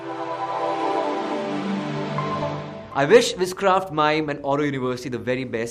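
Nothing in the recording stood out as a technical fault on listening.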